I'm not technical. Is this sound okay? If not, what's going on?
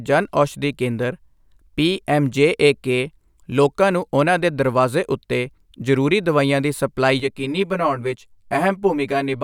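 No. From 7.2 s, right after "ਦਵਾਈਆਂ ਦੀ ਸਪਲਾਈ", to the end, the speech turns hollow and phasey. This is channel delay (comb filtering). One side arrives about 10 ms late, and when both sides are combined, parts of the sound cancel out.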